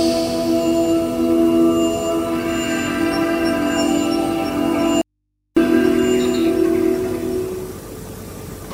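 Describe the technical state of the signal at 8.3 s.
At 8.3 s the signal is intact, with no audible technical fault at that moment.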